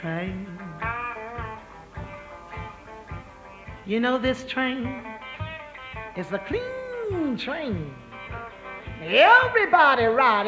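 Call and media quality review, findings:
No faults found in the clip. The call microphone processing is audible as a normal band-limit, with nothing above 8 kHz and the lowest bass trimmed by its high-pass filter.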